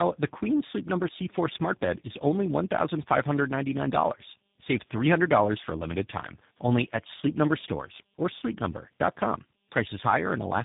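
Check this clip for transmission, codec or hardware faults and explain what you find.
There's one fault, and it runs through the whole clip: tandem speech coding. The sound fits a call that crossed several links with their own speech codecs, probably something like GSM full rate, then CVSD, then G.729A, with plain G.711 hops between. Each coder re-encodes what the previous one had already degraded, so the losses stack. You hear a rough, muffled, warbly voice, with nothing above 3.7 kHz.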